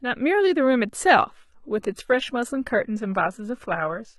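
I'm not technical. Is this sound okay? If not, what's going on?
No. From about 1.30 s to the end, the speech abruptly turns duller and swishy, with a fake-sounding hiss where the crisp top end was, and nothing drops out. This is an adaptive stream at a lower bitrate: the connection slowed, so the player switched to a lower-quality version.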